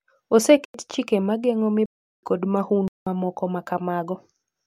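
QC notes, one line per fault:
0.65–0.74 s, block of digital silence: speech cuts to silence for 93 ms, which fits a 4096-sample block. The hard edges come without any fade, unlike a faded dropout.
1.86–2.23 s, block of digital silence: a 372 ms hole of silence, consistent with 16384 samples unfilled. There's no concealment inside, just abrupt cuts in and out.
2.88–3.07 s, block of digital silence: 186 ms of zeros, fitting an 8192-sample block. It is another power-of-two length with hard edges, pointing to a missed output buffer rather than a recording gap.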